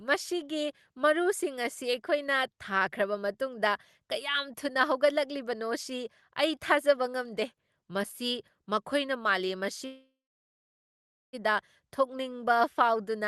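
At 9.85 to 11.35 s there is a call audio freeze, likely from packets stalling in transit until the jitter buffer emptied. The last sound trails off as a fading buzz or hiss, then 1.21 s of silence. The speech resumes where it stopped, 1.48 s late, with nothing lost.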